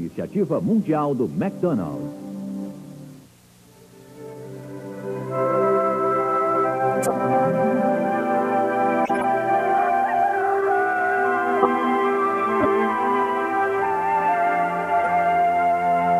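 Corrupt frames decoded at 7.02–7.11, 9.05–9.25, 11.62–11.66, 12.60–12.66, 13.79–13.86 and 15.04–15.07 s: damaged compressed frames were played anyway, so misread gains and codes throw energy into wrong frequencies, giving chirps and noise bursts, each spanning what sounds like a few frames.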